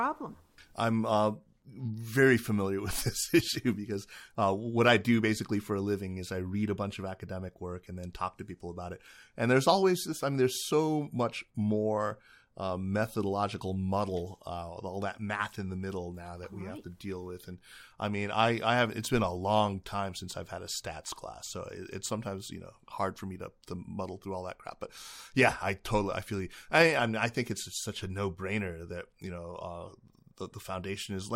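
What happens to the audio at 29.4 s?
At 29.4 s the speech carries on intact, with no dropout, click, distortion or other fault to be heard.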